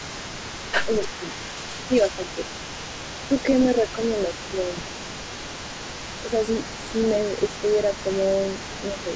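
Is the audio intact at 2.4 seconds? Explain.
No. Between 1.88 and 2.44 s the speech dips by as much as about 10 dB, with roughly a third of a second affected in total. This is speech suppressed in double talk, likely because the echo canceller mistook the local talker for loudspeaker echo and turned both down.

A delayed copy of the speech trails the original by 290 ms, sitting around 15 dB below it. This echo leak runs throughout the clip, including at 2.4 s, and is likely residue the loudspeaker side's echo canceller failed to remove from its microphone pickup.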